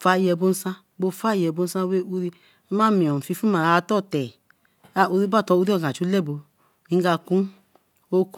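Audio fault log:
No technical faults can be heard anywhere in the speech signal.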